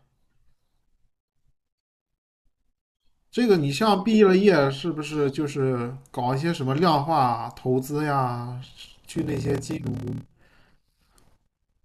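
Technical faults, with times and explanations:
8.62–11.85 s: block size mismatch (padded). Short blocks get zero-filled gaps, buzzing at 38.3 Hz. Speech runs at 0.889 speed, timbre unchanged.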